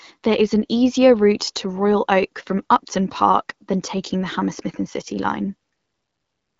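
No technical faults occur anywhere in the clip; the speech comes through an AMR wideband (HD Voice) link at 12.65 kbit/s, which keeps it clear.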